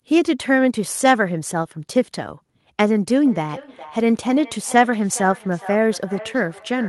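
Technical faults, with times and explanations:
3.26–6.88 s, feedback echo between two devices: the speech returns at a fixed interval of roughly 0.4 s, thinner and more ringing, peaking at about 17 dB below the direct speech. A second device in the room replays the call, its microphone recaptures it, and neither echo canceller removes the other's playback.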